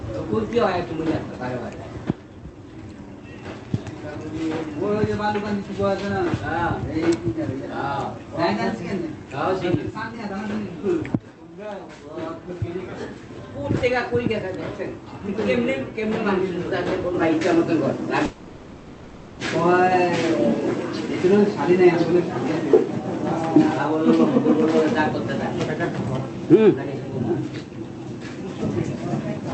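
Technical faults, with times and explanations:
18.25 to 19.41 s, long network dropout: for about 1.1 s the sound turns into a smeared, buzzy continuation of what came just before, fading as it drags on but never falling fully to silence, and then normal audio resumes with that stretch simply gone. This is likely a run of lost packets on the call path, with the receiver filling the gap by extending the last sound it had, on top of the call codec's usual top end limited to about 8 kHz.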